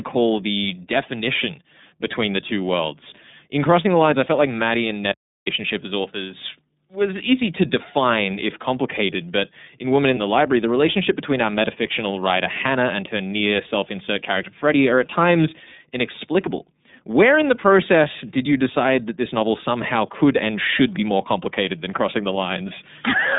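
From start to finish the speech carries the sound of the iLBC codec. Only a telephone band passes, from about 150 Hz to 3.7 kHz. Everything above is gone, so the voice sounds boxed and dull. The coding damage is plainly audible: the voice has a rough, synthetic edge. Each frame's excitation is coded on its own, and the texture points to 30 ms frames, which fits the 13.33 kbps mode.

At 5.12 s the sound cuts out abruptly. An audio dropout to silence follows, lasting about 350 ms, until 5.47 s. The gap is completely silent, with no room tone at all. Whatever was said in that span is lost. The speech resumes mid-flow with "as authors was easy". The likely cause is a brief loss of the input while the recorder kept writing silence.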